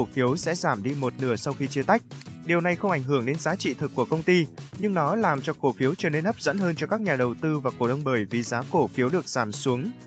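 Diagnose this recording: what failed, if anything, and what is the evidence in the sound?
Nothing here has failed: the sound simply carries the marks of a working call chain, with the microphone processing trimming the lowest bass and the call codec leaving nothing above about 8 kHz, both of which are what that path normally does.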